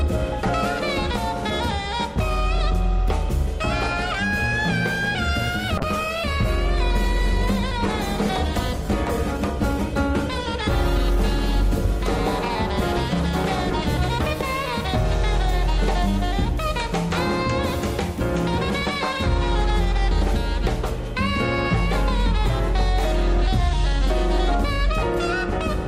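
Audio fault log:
5.79–13.59 s, call bitrate drop: the call's bandwidth estimate fell and the encoder was forced onto far fewer bits. The coarser coding turns the sound rough and watery, and the missing top end leaves it muffled, which fits a fall from roughly 96 kbps to about 20 kbps. The sound sits at its worst for about 5.2 s, then regains its clarity as the bitrate recovers toward 13.59 s.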